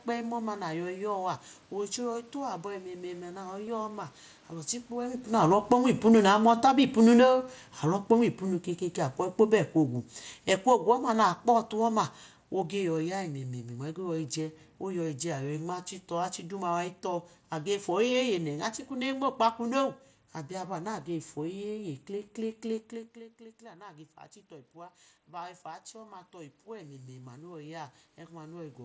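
At 3.66 s there is a concealed Bluetooth headset packet loss lasting about 15 ms, which points to a couple of lost packets on the link between headset and phone. The receiver filled the gap by repeating the closest-matching stretch of the preceding waveform, so it comes through as a brief buzzy tone in the speech, with a small warble where real audio returns.

From 5.41 s to 16.85 s the level shows automatic gain falling. Around 5 s the talker moves closer and the input jumps up. The gain control responds by pulling its gain down by about 15 dB over more than eleven seconds. The room background sinks along with the voice, and that shared fade is what separates this gain drift from a talker simply leaning away, where the noise level would stay put.

From 22.91 s to 28.8 s the opposite happens, as automatic gain rising. Near 22.5 s the talker moves away and the input falls by about 17 dB. 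The control then lifts its gain by about 9 dB over roughly six seconds, so voice and background swell together. Because the rise is slow and only partly makes up for the drop, the speech stays quieter than before. A sudden level step would instead point to movement alone.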